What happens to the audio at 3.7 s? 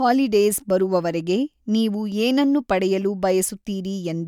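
Nothing goes wrong at 3.7 s: the speech continues intact through that moment, with no dropout, click, distortion or other fault to be heard.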